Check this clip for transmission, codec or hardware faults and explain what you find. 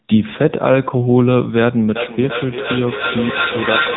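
Two faults are audible: narrowband codec damage across the whole clip, and a device-to-device feedback echo in the second half.

Throughout, the speech sounds buzzy, thin and plainly synthetic, with nothing above about 3.8 kHz. This is the AMR narrowband mobile codec. AMR-NB samples at 8 kHz and rebuilds the voice from a vocal-tract model excited by a few pulses per subframe. The plainly audible buzziness fits its bitrate of about 7.95 kbps. The call's microphone high-pass, which trims only the deepest bass, is separate from this damage.

From 1.96 s to the end, every stretch of speech comes back roughly a third of a second later, thinner and ringing. The repeats stack up rather than fading, reaching about 2 dB below the direct speech. This is feedback echo between two devices in one room. One device plays what the other's microphone sent, and that microphone picks the sound up again. Neither echo canceller removes audio played by the other device, so the loop keeps recirculating.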